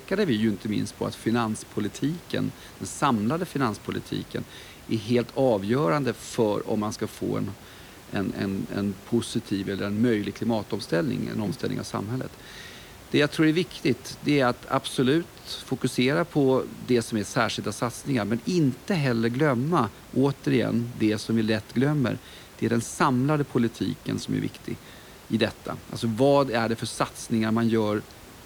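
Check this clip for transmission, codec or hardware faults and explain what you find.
No transmission, codec or hardware faults.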